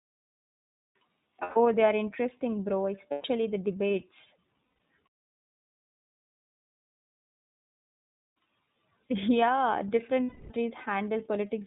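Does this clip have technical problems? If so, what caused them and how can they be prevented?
Yes. The whole clip passed through the iLBC codec, a narrowband VoIP coder that packs each frame's excitation independently at a low bitrate. The artefacts, plainly audible throughout, fit its 13.33 kbps mode with 30 ms frames. Nothing above 4 kHz survives, so the speech sounds muffled and telephone-like, with a slightly rough, synthetic edge from the coarse excitation coding. To prevent this, use a wideband codec such as Opus at an adequate bitrate wherever the link allows it.

Lost iLBC frames also occur at four points: 1.43 to 1.57 s, just before "they are interesting bro"; 3.11 to 3.25 s, between "they are interesting bro" and "the debates"; 4.71 to 4.78 s, right after "the debates"; and 10.25 to 10.51 s. Packets went missing, and the decoder filled each gap by repeating the last pitch cycle blended with noise. 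Each gap sounds like a held, faintly buzzy vowel, and the longest, at 10.25 s, fades as it goes on. Because every frame decodes independently, the speech comes back cleanly right after each gap. To prevent this, reduce packet loss on the network with QoS prioritisation, use forward error correction or redundancy, and use a properly sized jitter buffer.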